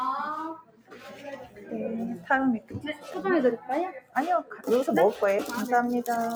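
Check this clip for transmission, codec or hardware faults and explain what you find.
One fault is running through the whole clip, a speech noise suppressor acting on non-speech sound, and it produces four dips where parts of the sound are pushed down.

Noise suppressor applied to music or sounds, throughout: a processor tuned for speech treats steady and decaying parts of this sound as background noise and keeps pulling them down. Gain swings of around 10 dB make the level pump and flutter while onsets pass through.

Sound cut by the noise suppressor, at 0.55 to 1.72 s (down about 16 dB), 2.6 to 3.18 s (about 14 dB), 3.96 to 4.16 s (about 16 dB) and 4.43 to 4.67 s (about 11 dB): here the suppressor judged the sound itself as noise, so sustained portions sink and tails are cut short.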